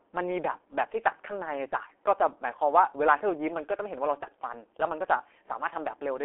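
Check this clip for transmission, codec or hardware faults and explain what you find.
The speech is coded with the G.723.1 codec throughout. It uses coarse 30 ms frames at about 6.3 kbit/s. Nothing reaches above 3.8 kHz, and consonants smear hoarsely, unlike clean band-limiting.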